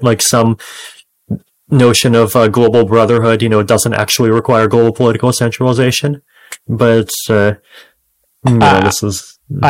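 Hard clipping runs through the whole of this speech recording, from start to finish. The signal is driven about 10 dB past what the stage can pass, so every loud peak is sliced off flat, a few percent of the waveform in all. Those squared-off tops spray harmonics high into the spectrum, which is heard as a harsh, buzzy fuzz riding on each louder syllable rather than occasional crackle.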